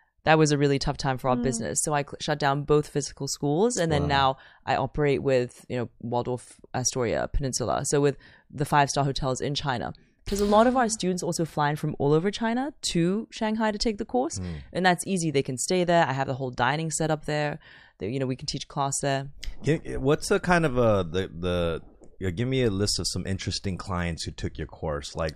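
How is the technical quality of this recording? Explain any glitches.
No technical glitches can be heard anywhere in the speech recording, and the signal stays continuous and intact throughout.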